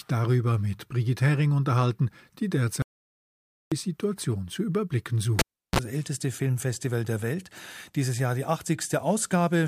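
The clip is speech, with two technical faults. The first is an audio dropout to silence from 2.82 to 3.72 s, just after "unterhalten die". The speech stops mid-flow and about 0.9 s falls to silence. No room tone remains, so whatever was spoken there is gone. The likely cause is a lost input, such as a disconnected device, a failed link or a stray mute, while the recorder kept writing silence.

The second fault is a cable pulled and plugged in, from 5.39 to 5.79 s, right after "zu überblicken". A pop marks the pull. Near silence follows for about 0.35 s. A short burst of 60 Hz mains buzz, about 33 ms long, comes as the plug's tip touches first. A second pop then brings the sound back. That sequence is the signature of a live cable being removed and reinserted.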